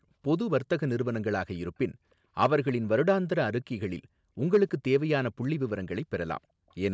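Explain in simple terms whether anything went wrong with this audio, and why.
Two problems can be heard. Hard clipping at 2.42 to 2.55 s and 4.54 to 4.96 s: the speech got too loud for the system, so its peaks were cut flat and crackle harshly. Brief echo leak at 2.67 s and 6.69 s: a faint delayed copy of the speech returns about a third of a second late, likely because the far end's echo canceller missed some loudspeaker sound.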